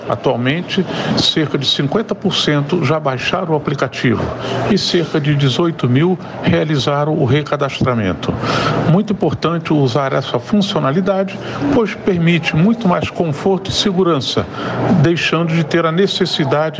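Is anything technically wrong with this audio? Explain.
Yes. Gain pumping runs through the whole clip: the gain ducks by around 20 dB under each loud sound. The likely cause is gain set far too high into a fast limiter, leaving the audio squashed, with loud and soft parts pressed close together. The call microphone processing's band limit at 8 kHz is normal and not a fault.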